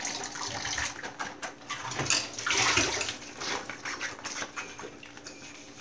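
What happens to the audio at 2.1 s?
Nothing goes wrong at 2.1 s: the sound continues intact through that moment with no dropout, click or other fault.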